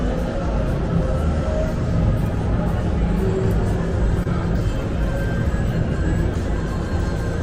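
At about 4.23 to 4.27 s there is a short concealed packet loss: roughly 20 ms of audio never arrived in time, and the receiver filled the gap by extending the preceding sound before blending back. It comes across as a brief smear or wobble rather than the abrupt silence of a plain dropout.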